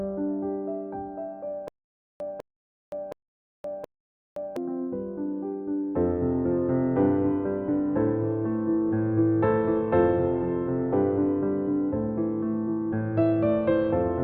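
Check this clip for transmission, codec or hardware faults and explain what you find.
One fault appears. From 1.68 to 4.56 s there is a stutter with silent gaps: a 200 ms burst repeats four times, with 520 ms of digital silence between repeats. It is likely a stalled stream replaying its last buffer. Unlike plain dropouts, the identical fragment returns every 720 ms.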